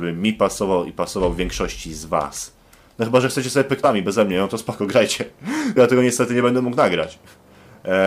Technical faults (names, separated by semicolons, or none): damaged data in a compressed stream